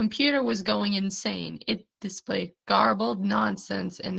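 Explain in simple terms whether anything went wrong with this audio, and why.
Opus voice compression runs through the whole clip, from 0 to about 4 s. The speech was squeezed by a codec built for voice calls, which models the voice as a simple vocal-tract filter driven by a roughly coded buzz. To save space it discards everything above about 10 kHz and describes the remaining sound only coarsely. The result is plainly audible: the speech sounds dull, slightly hoarse and a little robotic, lacking its crisp top end.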